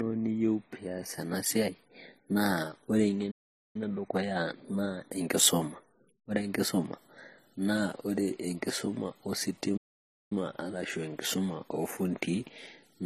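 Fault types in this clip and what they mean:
Transcoding between lossy codecs: smeared, layered artefacts that likely come from a low-rate HE-AAC pass re-encoded to MP3 around 40 kbit/s.
Playback stall: the speech cuts to silence twice, about 0.44 s right after "na ore" and about 0.54 s near 9.8 s, likely from the player running dry.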